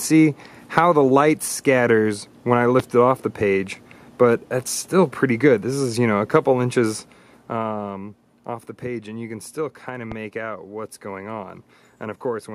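At 2.80–2.82 s and again at 10.12–10.14 s, a loud pop cuts sharply through the sound, which carries on underneath. The second is harder, peaking about 15 dB above the surrounding level against about 10 dB for the first. The likely cause is a voltage pulse from a switch, plug or static entering the chain. On the waveform each shows as a tall, narrow spike. On a spectrogram it is a thin vertical stripe spanning the full frequency range.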